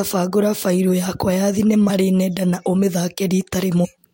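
At 1.88 to 1.90 s and again at 3.84 to 3.86 s the speech lurches forward, as if about a tenth of a second had gone missing each time. These are compressed frames skipped: a handful of whole coded frames were never played, so playback jumped ahead.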